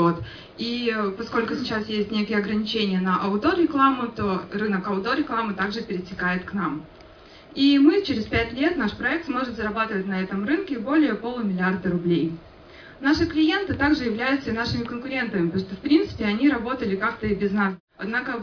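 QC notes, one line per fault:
No faults heard anywhere in the clip.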